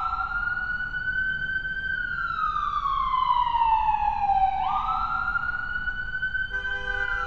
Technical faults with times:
none

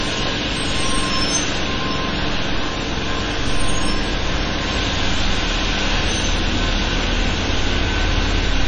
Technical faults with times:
0.00-8.67 MP3 compression

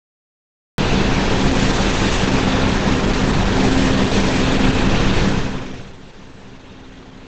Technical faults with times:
0.00-7.28 Opus compression
0.00-0.78 cut-off start

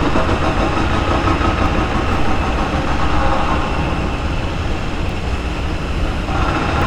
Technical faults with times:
1.66-6.82 clock drift buffer slips

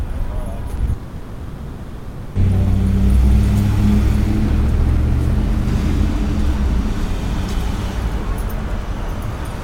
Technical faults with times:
0.75-0.89 short concealed packet loss
0.93-2.37 long network dropout

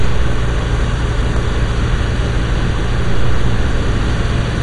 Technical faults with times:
0.00-4.63 MP2 compression
1.37 dropped buffer (overrun)

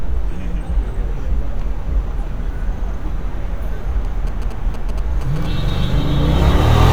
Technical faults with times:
4.05-5.85 GSM signalling bursts

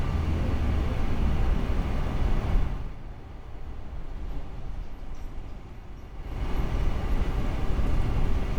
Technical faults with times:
2.52-2.99 zipper noise

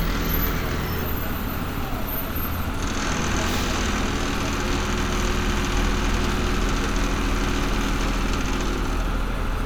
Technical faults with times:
none

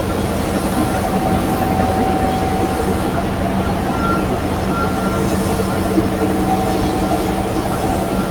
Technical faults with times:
none

